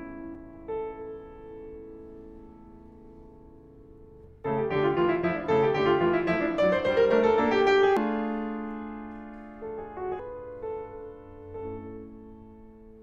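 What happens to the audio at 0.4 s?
At 0.35 s the music is hit by damaged data in a compressed stream: a brief burst of corrupted bytes that the decoder tries to read as a valid frame. It decodes nonsense, loses sync and hunts for the next frame header, so the instant sounds like a short chirp, squawk, click or short hole.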